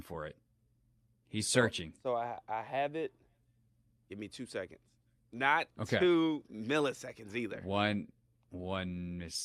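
Speech, with no audible technical faults anywhere.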